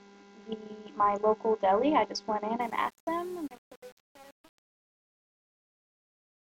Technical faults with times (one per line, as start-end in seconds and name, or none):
2.61-6.52 truncation distortion on a fade